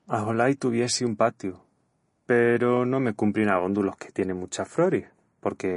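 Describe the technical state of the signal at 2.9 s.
At 2.9 s the speech carries MP3 compression damage, present across the whole clip. Nothing sounds above 10.5 kHz, and weak detail flickers, giving a watery, swirly edge to s sounds. This is likely a starved encoder, fitting a low bitrate near 40 kbps.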